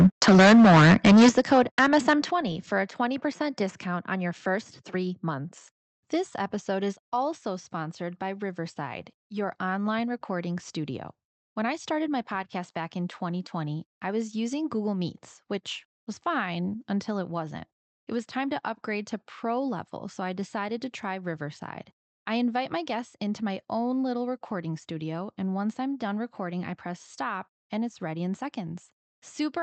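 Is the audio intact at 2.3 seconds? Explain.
No, not quite. At 2.31 s the whole sound, voice and background together, drops by about 7 dB in a single step, right before "for a". That sudden, even drop in level is the signature of the microphone volume being stepped down, likely because the call software decided the input was running too hot and cut the device's input volume. Nothing gets cut out, but the level shifts.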